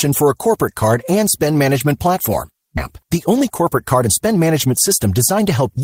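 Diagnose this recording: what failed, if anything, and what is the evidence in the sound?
At the network and jitter buffer stage, a skip ahead at 2.77–2.79 s after "and spend management platform" discards roughly 0.7 s of speech, joining both sides with no gap.

From 3.04 to 5.78 s, a jitter buffer speed-up trims pitch-period slices to drain excess delay, so the speech runs 108% fast at unchanged pitch and sounds hurried.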